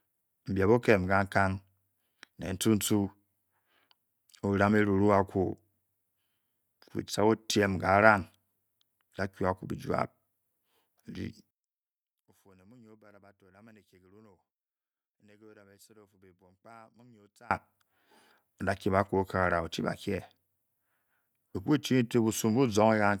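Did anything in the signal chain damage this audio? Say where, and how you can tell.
Yes. From 11.51 to 17.51 s the speech drops by about 30 dB and turns faint, then returns at full level. That points to one channel inverted, likely a polarity swap in the analogue wiring. When the two channels are summed to mono, the shared centre content cancels.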